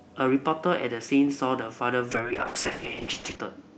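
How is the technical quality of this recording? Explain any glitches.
The recording has one clear fault, a call bitrate drop, heard against the normal coding of a call path whose band stops around 8 kHz, as Opus does at a moderate rate.

From 2.12 s to the end, the speech turns rough, watery and muffled. The call's bandwidth estimate fell, so the encoder had to code with far fewer bits. The sound points to a fall from around 32 to about 6 kbps, held at its lowest for about 1.26 s. On a spectrogram, the upper band thins sharply and the harmonics smear. The waveform keeps its level but loses fine detail.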